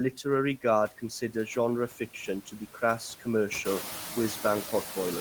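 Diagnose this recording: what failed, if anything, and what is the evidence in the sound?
Noise suppressor artifacts come from the call-processing stage and run through the whole clip. The suppressor pulls the steady background down by only about 4 dB, frame by frame, so some residue remains rather than vanishing. The effect is clearest after the room noise rises by about 16 dB around 3.5 s, where it sits about 10 dB under the speech. On a spectrogram the noise floor looks mottled, with blotchy time-frequency patches that dip between phrases and refill under speech.

Speech cut by the noise suppressor, also at the call-processing stage, occurs between 1.89 and 2.28 s. Inside that window, roughly 150 ms of speech is turned down, by as much as about 11 dB at the deepest point, and those portions sound swallowed and faint. The suppressor has misjudged low-level speech energy as noise and attenuated it along with the background. 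On the waveform this shows as notches in the envelope. On the spectrogram, harmonic and fricative energy thins or breaks into gaps there.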